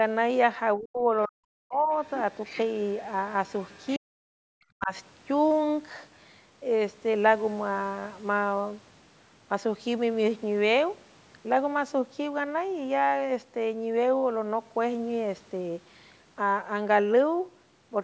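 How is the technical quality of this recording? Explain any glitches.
The recording has two related call-processing faults, both in the first five seconds.

Speech suppressed in double talk occurs at 0.77 to 1.09 s, 1.27 to 1.91 s, 3.98 to 4.29 s and 4.71 to 4.92 s. In each stretch the speech drops sharply, by roughly 40 dB at its deepest. The likely cause is the echo canceller. Both ends spoke at once. It could not tell the talker from the loudspeaker echo, so it turned everything down.

The other side's voice leaking through appears at 2.04 to 2.61 s and 3.59 to 3.99 s. A second voice sits under the talker. It is about 15 dB below the speech in the first stretch and a faint trace about 30 dB down in the second. This is likely residual echo. The far end played from the talker's loudspeaker, and the canceller did not fully remove it from the microphone. The second leak runs straight into the suppression starting at 3.98 s.

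The call's microphone processing leaves nothing above 8 kHz, which fits a 16 kHz sample rate.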